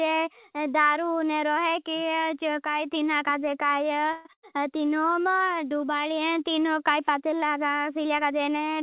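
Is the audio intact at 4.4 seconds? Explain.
No. From 4.33 to 4.45 s there is a burst of packet loss. About 100 ms of speech never arrived, so the receiver stretched the last sound it had and faded it out, a held buzz or dimming hiss rather than silence. The speech then picks up past the missing stretch. That skipped stretch and the smeared fill, not a clean mute or a click, set it apart from a simple dropout.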